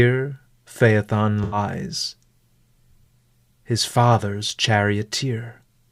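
AAC frame loss with concealment occurs from 1.43 to 1.57 s. A burst of roughly 85 ms of data, which fits four lost AAC frames, went missing, and the decoder patched the gap from the last good spectrum. The speech briefly turns smeared, noisy and phasey.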